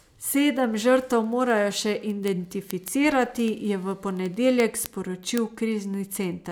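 Speech carries word clock ticks from 0.13 s to 6.49 s, roughly ten per second, about seventy in all. Unlike random clicks or dropouts, they fall at a steady rate, which points to an unlocked digital receiver drifting roughly 200 ppm against its sender, slipping one sample each time.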